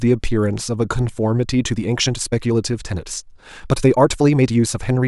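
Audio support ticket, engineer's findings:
Time-stretched section, 1.4 s to end. Speech abruptly runs about 1.37x faster, rushed. Likely cause: stretch/fit step in editing or playback software dropping short segments to shorten while preserving pitch. Distinguishing point: pitch and timbre unchanged, unlike a sample-rate or tape-speed error, where faster pace would also raise pitch.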